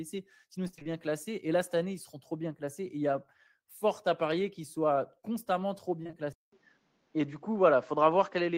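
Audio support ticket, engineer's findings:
Repeated packet loss (robotic sound), 0.67–0.87 s: five gaps, longest 24 ms, about half the span concealed. Choppy, robotic texture from rapid successive concealment, unlike an isolated smear.

Short concealed packet loss, 6.03–6.15 s: three consecutive 20 ms holes bridged by extrapolation from the preceding audio. A brief smear or wobble, not sustained chopping.

Band drop from 6.32 s to end: nothing above 7.6 kHz, preceded by 200 ms silence, with a level shift of a few dB and a new noise floor well below the signal. Likely the input switched to a poorer device; the silence and the noise change distinguish it from codec band-limiting.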